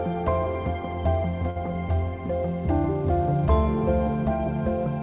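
At 1.50 to 1.58 s there is a short stall from a late packet. The jitter buffer ran dry, so the last sound was stretched for 57 ms, then resumed exactly where it stopped. Unlike loss concealment, nothing is skipped. The held sound has a slight buzz or dip, and everything after arrives 57 ms late. Nothing above 4 kHz comes through the call path, which fits a G.711 A-law codec at 64 kbps.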